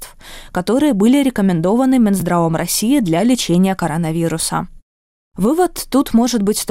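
At 2.20 to 2.22 s and again at 4.40 to 4.43 s, chunks out of order garble the speech: a 10 ms chunk plays one, then two, chunks late. The waveform shows abrupt steps at each join.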